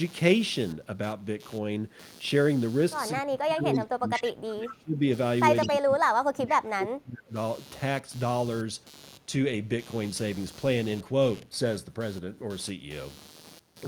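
Computer activity noise runs through the whole recording: a buzzing, scratchy pulse repeating around 150 times a second, roughly 25 dB below the speech. It rises and falls with the computer's processing load rather than with the sound, as load changes disturb the audio circuit's shared ground. On a spectrogram it forms a comb of faint, evenly spaced harmonic lines that persist through pauses.

From 3.21 to 5.03 s, and again from 5.65 to 7.35 s, the speech is suppressed in double talk. The voice dips, loses its top end and drops out in pieces, by up to about 25 dB in the first stretch and about 30 dB in the second. The likely cause is an echo canceller that could not separate the talker from loudspeaker echo and turned everything down. The waveform shows ragged notches in the envelope.

Echo leak appears at 4.13 to 4.31 s, 4.67 to 4.74 s, and 5.61 to 5.70 s. Each is a copy of the voice arriving 207 ms late, at about 10, 20 and 15 dB below the speech. 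This is likely loudspeaker pickup that the echo canceller failed to remove. A spectrogram shows faint duplicates of the speech patterns, shifted 207 ms to the right.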